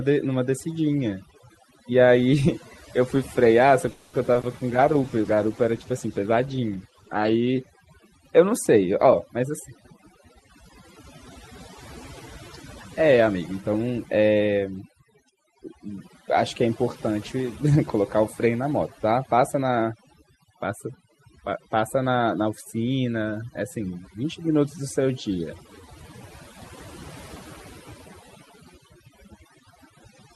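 The whole speech clip has overdone noise removal running under it. The suppressor was pushed too hard, so any frequency band near its noise estimate gets dragged almost to nothing. The background sits in near silence with little twinkling specks, and the softer parts of the voice get caught too.

From 3.91 to 4.15 s there's a call audio freeze. The sound doesn't cut out. The last bit of audio gets stretched into a fading buzz for about 220 ms, and then things carry on from exactly where they stopped. Nothing is lost, but the call is now running about 220 ms further behind. The likely cause is packets held up in transit long enough for the jitter buffer to run dry.

Right after that come two short concealed packet losses, at 4.33 to 4.37 s and 4.41 to 4.45 s. In each, about 20 ms of audio never reached the decoder in time, so the receiver patched the hole by continuing the preceding sound and blending back into the real audio. 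They come through as two quick smears close together.

From 4.69 to 7.77 s there's a call bitrate drop. The encoder was pushed from 32 kbps down to 14 kbps, and it sat at that low rate for about 3 s. At that rate it codes much more coarsely and loses the top end, so this stretch goes rougher and more muffled than the rest until the rate comes back up.

Two jitter buffer speed-ups follow. From 9.05 to 11.04 s the buffer was holding more than it wanted, so the receiver trimmed out tiny pitch-period slices over and over, around 150 ms in total. The speech runs about 7% fast at unchanged pitch, so it just feels a bit hurried. A second, sharper one at 13.02 to 13.42 s runs about 13% fast and removes around 70 ms, so that moment sounds noticeably rushed.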